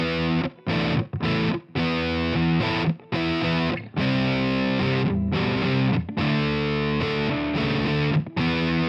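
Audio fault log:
Nothing to log here; no problems turn up anywhere in this one.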